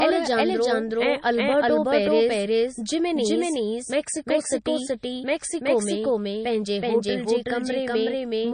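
A doubled audio track runs through the whole clip. The same speech is heard a second time, roughly 400 ms behind, at about the same level as the original. The trailing copy is full-band, with no decay or room colour, so it sounds like a clean overlapping replay rather than an echo. That points to the audio likely being captured twice, once through a slower path, or to an edit holding two copies out of step.

MP3 compression damage is also plainly audible throughout, and nothing remains above 9.4 kHz. The sound is likely MP3 encoded at a low bitrate, which fits something around 32 kbps. With so few bits, the encoder discards weaker frequency components, and they flicker on and off from frame to frame. That gives the speech a watery, swirling texture, with metallic chirps on s sounds and smeared attacks, while the fixed treble cutoff dulls the top end.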